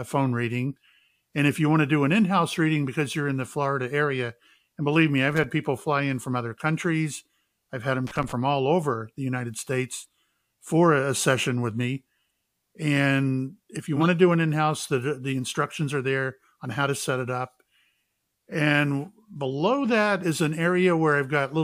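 Speech, with two kinds of fault. Loose connector crackle appears as irregular bursts of scratching from 5.29 to 5.44 s and from 8.07 to 8.32 s, where an intermittent contact chops the signal. A corrupt frame decoded produces brief noise blips at 9.97 to 10.02 s, fairly quiet, and at 13.96 to 14.06 s, much louder at around -10 dBFS. Each lasts about as long as a couple of damaged codec frames whose misread data put energy at the wrong frequencies.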